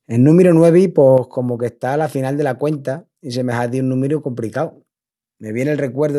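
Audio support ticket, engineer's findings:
Level drop of about 6 dB at 1.18 s, right after "númiru nuevi", persisting to end of clip. Abrupt step, no fade. Likely one channel drops out upstream of the mono sum, halving the shared signal's contribution.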